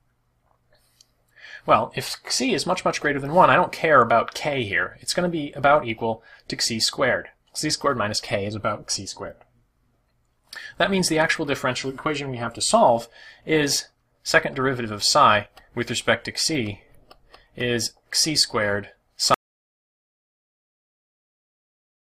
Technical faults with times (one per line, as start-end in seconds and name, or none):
19.34-22.20 audio dropout to silence